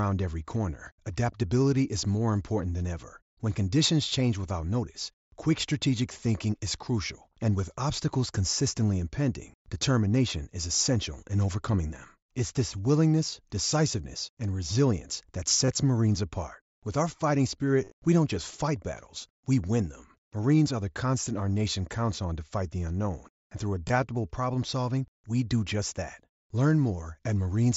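Concealed Bluetooth headset packet loss shows up four times, where packets between headset and phone dropped out and the receiver filled the gaps by repeating the best-matching recent stretch of waveform. After "decisiveness and resilience that", 15.65 to 15.68 s hides about 30 ms. After "our fighting", 17.84 to 17.92 s scatters 60 ms of loss over 75 ms, giving a brief buzzy hold and a slight warble before "we don't just fight". A tiny single slip sits at 19.63 s, and a short two-frame slip at 23.88 s, before "problem solving we do". All of this rides over the light graininess of the mSBC link.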